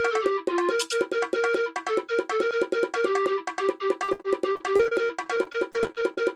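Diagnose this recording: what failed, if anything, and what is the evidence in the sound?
From 4.03 to 6.22 s the sound turns choppy, with gaps up to 60 ms: repeated packet loss on the network, patched by concealment.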